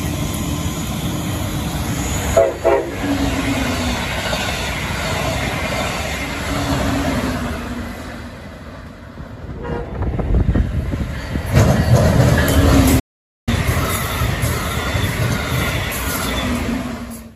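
At 12.99 s the sound halts mid-flow and stays silent until 13.49 s, a gap of about 0.48 s, before resuming. This playback stall is likely the player starving for data or its thread blocking. Unlike a brief dropout or click, it is a long, clean silence.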